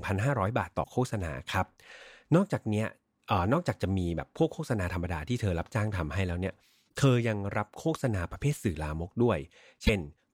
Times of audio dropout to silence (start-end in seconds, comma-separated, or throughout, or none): none